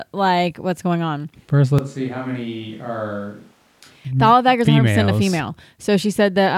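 Speech recording in which, from 1.79 s to 4.05 s, the sound turns suddenly roomy and thin, drops by around 10 dB, and gains room noise only about 30 dB below speech: likely a switch to a distant microphone, not added reverb, given the abrupt cuts and rising noise.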